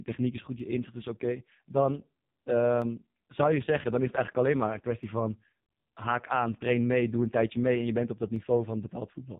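AMR narrowband mobile codec damage runs through the whole speech clip. Nothing above 3.8 kHz survives, so the voice sounds boxed-in and telephone-thin. The heavy buzzy, synthetic coloration comes from the vocal-tract model being fed very few pulses, which fits AMR-NB's lowest 4.75 kbps mode.

Clock drift buffer slips begin at 0.60 s, right after "techniek is goed", and recur every 1.11 s until 8.36 s. Each is a regular click or pop. The likely cause is two clocks disagreeing by roughly 150 ppm, so a handful of samples are dropped or repeated each time.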